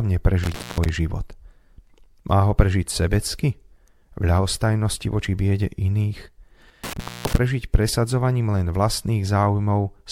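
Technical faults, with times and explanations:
0.43–0.89 s and 6.84–7.38 s, intermittent contact: a loose connection opens for about 0.23 s and 0.25 s, dropping the speech to faint hiss, with crackle as the contact breaks and remakes.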